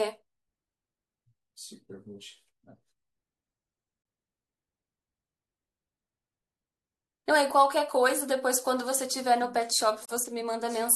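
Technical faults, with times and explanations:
10.05–10.09 s, gap at a join of encoded pieces: untrimmed encoder delay and last-frame padding between separately encoded pieces leave a 37 ms silence, abruptly interrupting the speech.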